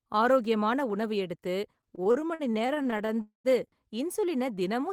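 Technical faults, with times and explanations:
1.81–3.18 s, repeated stalls (stutter): seventeen short hiccups, none over 50 ms, where late packets drained the buffer and the last sound got stretched, so it drags.
3.21–3.47 s, call audio freeze: the sound buzzes on, then goes quiet for about 120 ms, likely the buffer running dry while packets were held up.
4.42–4.86 s, jitter buffer slow-down: the receiver repeats pitch periods to rebuild its reserve, so this stretch plays at 90% speed with the pitch unchanged.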